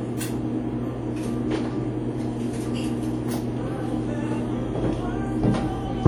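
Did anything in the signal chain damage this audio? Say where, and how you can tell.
Yes. The damage sits at the codec stage and runs through the whole clip: the sounds carry a ringing, washy quality and a hiss that rises and falls with the signal, which points to WMA compression, likely the early WMA version at a low rate consistent with about 48 kbps. Long transform blocks smear quantisation noise over tens of milliseconds around each event, and quieter spectral detail is discarded, even though content still extends up to about 20 kHz.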